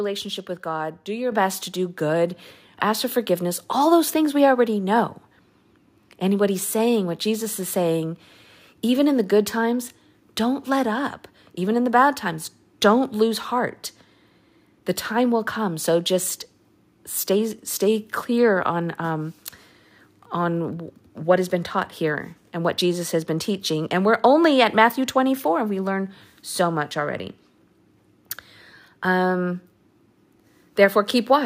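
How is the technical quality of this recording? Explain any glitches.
The recording has one glitch. At 1.32 s the microphone volume stepped up: input gain jumped about 6 dB at once, lifting speech and background together, unlike a talker simply getting louder.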